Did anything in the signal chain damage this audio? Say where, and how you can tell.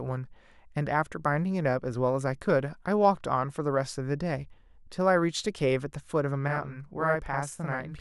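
Yes. The fault sits at the driver or buffer stage. From 6.48 s to the end of the clip, the speech doubles into a slap echo at equal level. The late copy trails by 42.67 ms, which fits a 2048-sample buffer. This is a channel delay (doubling). One channel was held back by a whole buffer. The two were then summed to mono. The delayed copy therefore arrives as a distinct second hit, not a blend.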